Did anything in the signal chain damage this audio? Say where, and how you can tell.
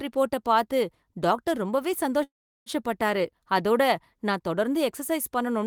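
Yes, a call audio freeze at 2.23–2.69 s: the sound stalls into a fading fill, then near-silence, and resumes without skipping, unlike packet loss. Likely network delay emptied the jitter buffer.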